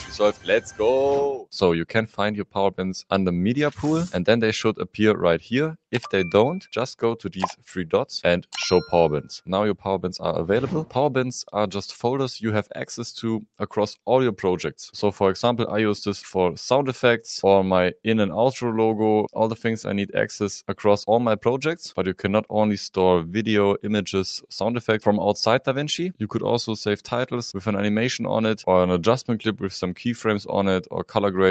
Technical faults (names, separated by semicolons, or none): none